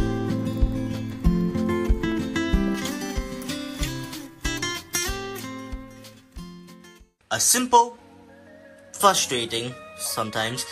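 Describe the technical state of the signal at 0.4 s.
At 0.4 s the signal is intact, with nothing audibly wrong at that point.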